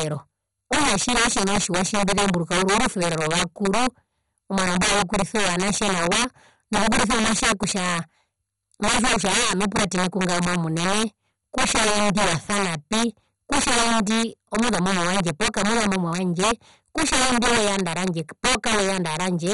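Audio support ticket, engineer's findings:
Integer overflow, throughout the speech. Violent cracks on loud syllables, far harsher than clipping. Gain stage driven about 12 dB past full scale, with around one sample in twenty over the limit. Sum wraps to the opposite sign instead of saturating, so each overshooting peak jumps across the full range. Suspect a fixed-point gain or mix stage without saturation.

MP2 compression, throughout. Dull, band-limited sound with nothing above 11.2 kHz, plus gurgling, granular distortion on the speech. Likely an MPEG Layer II encode at a low rate, which fits roughly 56 kbps. Too few bits for 32 sub-bands: upper bands switched off, remaining bands flickering and coarsely quantised. Heavy damage.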